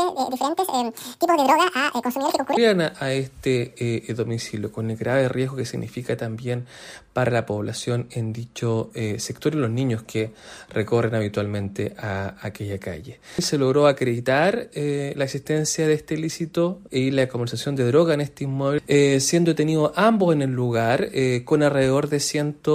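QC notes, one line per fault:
0.00–2.57 s, section at the wrong speed: sound runs at double speed, pitched around ten semitones high and hurried, likely from a clock mismatch; tempo rises with pitch, unlike a pitch shift.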